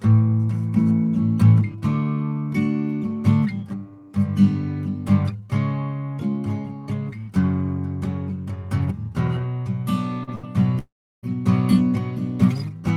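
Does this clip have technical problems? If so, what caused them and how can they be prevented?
Yes. Short concealed packet loss at 10.23 to 10.30 s: about 40 ms of the stream never reached the decoder in time. The receiver bridged roughly 38 ms of that gap by extending the music that came just before, then blended back into the real signal. The result is a brief smear or wobble in the music rather than a clean cut. A larger jitter buffer and forward error correction would let such isolated losses be recovered instead of concealed.

Burst of packet loss at 10.35 to 10.46 s: about 80 ms went missing in a row, only moments after the first loss. The receiver again continued the preceding sound, this time for about 79 ms, letting it fade as the gap went on, so the music briefly turns into a held, dwindling tone or hiss. It then resumes slightly further on, with that stretch gone. Redundant packet coding or interleaving spreads such bursts out so they can be rebuilt.

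Long network dropout at 10.79 to 11.26 s: nearly half a second of music is lost. The concealment first stretches the last sound into a fading buzz or hiss, then gives way to about 340 ms of silence before the music returns further along, missing roughly 440 ms. The likely cause is a temporary stall in the network connection, such as congestion or a wireless handover. A more stable wired link, or adaptive buffering that rides out short stalls, would prevent it.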